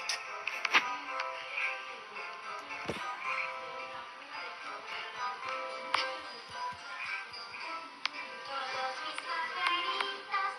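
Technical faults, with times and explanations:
Nothing technical goes wrong anywhere in this recording, so there's nothing to flag.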